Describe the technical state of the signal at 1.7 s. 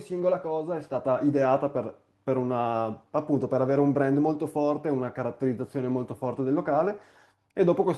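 At 1.7 s the signal is intact, with no dropout, clipping, distortion or other fault audible at that point.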